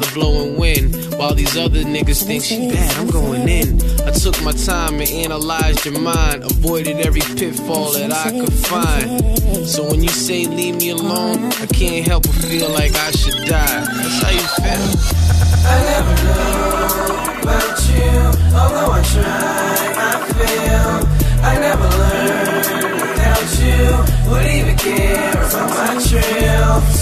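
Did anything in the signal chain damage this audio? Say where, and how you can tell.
Yes. At the codec or storage stage, repeated frames replay a 116 ms block three extra times from 15.30 to 15.65 s, a stutter, adding 348 ms.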